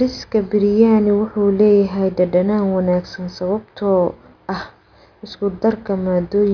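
Nothing stood out on listening to this speech recording.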